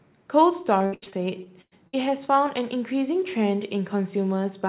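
From 0.78 to 1.95 s, repeated packet loss (robotic sound) chops the speech: eight gaps, the longest 100 ms, each filled by extending the last sound, so about a third of the span is concealed. Spectrogram and waveform show smeared, looped stretches below 4 kHz.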